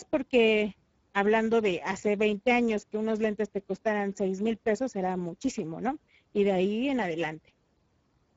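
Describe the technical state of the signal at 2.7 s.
At 2.7 s the speech sounds hoarse and grainy, with nothing above 7.7 kHz: Speex codec damage, spanning the whole clip, consistent with a starved, low-bitrate setting near 10 kbps.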